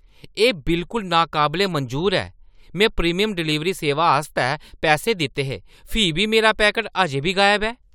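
No technical faults can be heard anywhere in this recording.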